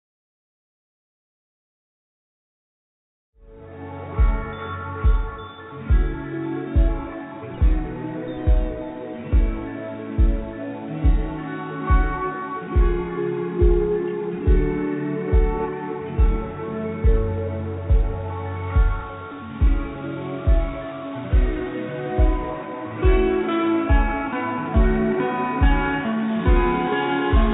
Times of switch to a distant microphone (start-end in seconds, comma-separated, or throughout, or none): none